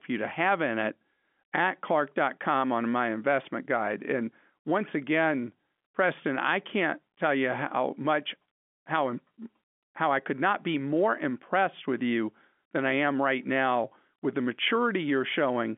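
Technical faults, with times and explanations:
No faults turn up here, just speech carried over a G.711 telephone line, so it has that narrow phone-band sound, running from roughly 200 Hz up to 3.4 kHz with nothing above about 3.7 kHz.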